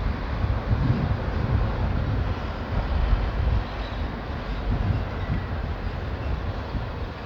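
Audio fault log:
No technical faults can be heard in this recording of sounds.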